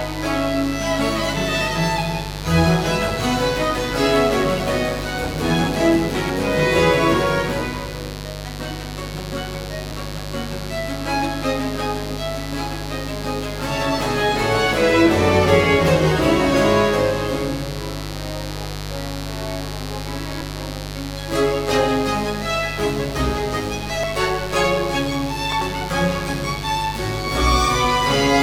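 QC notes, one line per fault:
Throughout: mains buzz. A steady, raspy buzz sits about 10 dB below the programme level. It is built on 50 Hz, and its harmonics climb well into the kilohertz range. That spread comes from sharp switching spikes, of the kind a dimmer, a rectifier or a missing shield lets in, arriving twice per mains cycle. They give the hum an edged, buzzy character, not a pure low tone, and it never lets up across the clip.
6.11–6.30 s, 20.32–20.41 s, 24.04–24.13 s, 25.43–25.61 s: compressed frames skipped. At each point the audio jumps forward. Roughly a tenth of a second goes missing at 6.11, 24.04 and 25.43 s, and around 0.3 s at 20.32 s. Whole coded frames were dropped before playback, either missing from the file or rejected by the decoder as damaged, so the skip falls in frame-sized steps.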